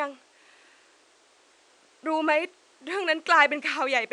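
Nothing stood out on listening to the speech, with the faint room noise sitting about 36 dB below it.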